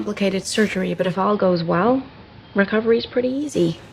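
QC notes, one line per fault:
0.86–3.59 s, digital radio blending to analogue: the receiver lost its digital stream and cross-faded over roughly 390 ms to the station's AM broadcast, then blended back. During the analogue stretch the narrower AM bandwidth dulls the top end, and a steady hiss sits about 35 dB below the signal. On a spectrogram the upper band thins out with a faint noise floor beneath. The waveform keeps the same level throughout.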